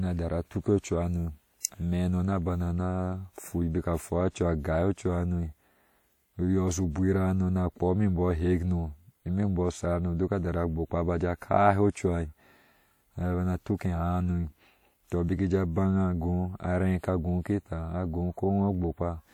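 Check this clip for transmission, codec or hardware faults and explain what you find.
There's one codec fault: a pre-echo at 1.63 s, between "tara tuke cuha no" and "ameh hano na bana". A sharp onset sits late in a transform block, so the quantisation noise meant for it smears about 19 ms earlier, giving a short hiss just before a softened, blurred attack.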